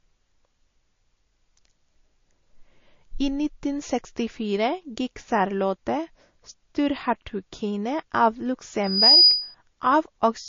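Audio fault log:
throughout, transcoding between lossy codecs: The speech was likely encoded at a low bitrate in one lossy codec, then re-encoded in another, consistent with MP3 then Vorbis. The second encoder spent bits on the first's artefacts, so two kinds of swirly smearing overlap, with nothing above 7.2 kHz.
8.83–9.55 s, loudspeaker feedback squeal: A microphone picked up the loudspeaker it was feeding, and at 4.9 kHz the loop gain passed one. That tone fed on itself, swelling over about a third of a second into a squeal about 10 dB above the speech before it stopped.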